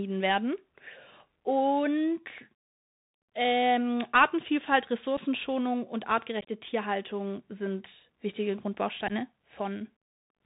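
Throughout, the speech sounds narrow and muffled, with scratchy s sounds and a granular hiss: the Bluetooth CVSD headset codec, cutting everything above 4 kHz and fitting a 64 kbps link. Unconcealed Bluetooth headset packet loss punches abrupt holes in the speech: 7.5 ms at 5.17 s, a chopped 6.41–6.49 s stretch, and 15 ms at 9.08–9.12 s.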